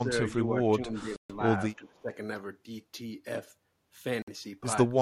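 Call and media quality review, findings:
Speech suppressed in double talk, 0 to 0.11 s and 0.27 to 2.13 s: level drops, roughly 20 dB then 15 dB. Likely echo canceller attenuating near-end speech during overlap.

Bluetooth stall, 1.16 to 1.32 s and 4.22 to 4.28 s: silent gaps of 135 ms and 53 ms. Likely headset buffer underrun awaiting retransmitted packets.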